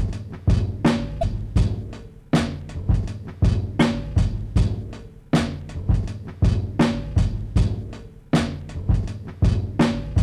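At 1.19 to 1.23 s and again at 3.80 s, damaged data in the compressed stream makes the decoder misread frames and resync, producing a short chirp, squawk, click or hole. A plain dropout would leave silence, and a click would be a single tick.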